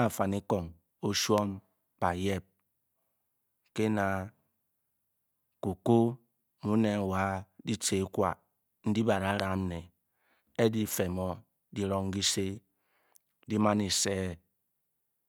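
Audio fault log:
1.38–1.40 s and 9.40–9.42 s, loud pop: a voltage spike, likely from a switch or static, puts a single sharp pop some 15 and 20 dB above the speech, which continues underneath.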